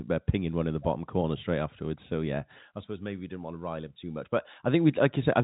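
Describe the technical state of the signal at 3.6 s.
At 3.6 s the speech is intact, carried through G.711 telephone coding, so nothing above about 3.8 kHz comes through, but no fault occurs at that moment.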